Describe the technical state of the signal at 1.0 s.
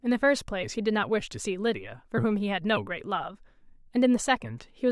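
At 1.0 s the signal is intact, with no dropout, clipping, distortion or other fault.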